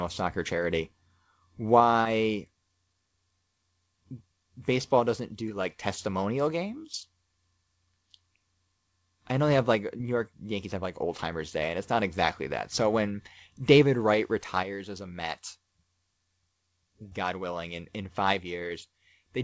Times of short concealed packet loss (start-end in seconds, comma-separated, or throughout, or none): 2.02-2.07, 5.49-5.52, 9.98-10.01, 17.09-17.13